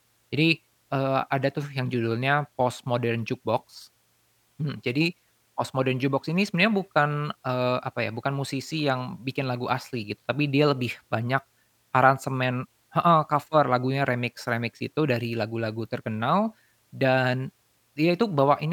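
A recording of speech, with no technical fault to be heard anywhere in it. Nothing in the audio calls for a time stamp or a cause.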